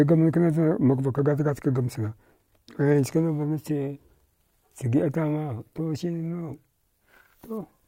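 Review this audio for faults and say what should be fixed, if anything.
No faults can be heard anywhere in this speech recording. Nothing needs to be fixed.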